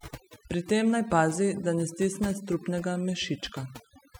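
A speech recording with overdone noise removal running through the whole clip. A noise reduction process was pushed too hard. It cuts individual frequency bands deeply whenever they sit close to its noise estimate. The gaps between phrases drop away, broken by small twinkling artefacts. Softer parts of the voice fall below the threshold and get removed too.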